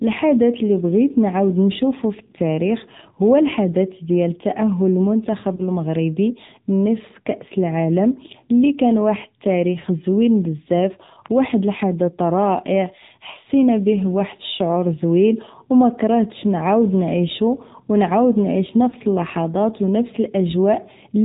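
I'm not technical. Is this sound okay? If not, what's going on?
No. The whole recording has passed through the AMR narrowband mobile codec, the compression used on older mobile phone calls. It removes everything above 4 kHz and rebuilds the speech from a simplified model, so the speech sounds muffled, buzzy and plainly synthetic throughout.

There are also lost AMR speech frames, short chunks of the call signal that never arrived intact. The decoder fills each gap by briefly repeating the previous sound at lower strength, which you hear as a brief dip or warble at 5.56–5.63 s, 9.80–9.86 s, 13.32–13.36 s and 18.90–18.95 s.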